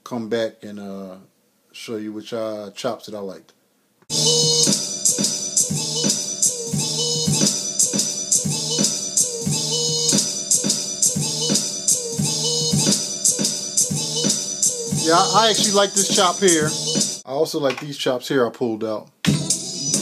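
Nothing goes wrong anywhere in this recording, so there's nothing to flag.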